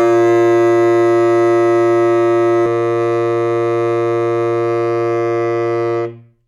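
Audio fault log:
0.00–2.66 s doubled audio track: the music already carries a second full-band copy trailing roughly 0.4 s behind and about 5 dB quieter, dry with no decay or room colour, stopping abruptly at 2.66 s; likely a slower second capture path mixed in.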